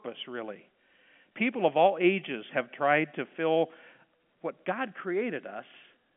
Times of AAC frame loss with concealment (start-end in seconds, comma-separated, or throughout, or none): none